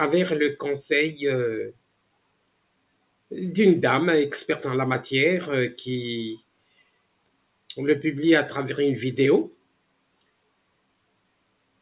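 A noise suppressor applied to music or sounds acts throughout, treating sustained material as noise and swinging the level by roughly 10 dB, so held parts pump and thin. Sound cut by the noise suppressor occurs from 1.69 to 3.31 s, 6.37 to 7.7 s and 9.51 s to the end, where steady or decaying passages sink by about 21 to 22 dB while sharper onsets survive. The audio also carries the G.711 A-law call codec's 4 kHz band limit.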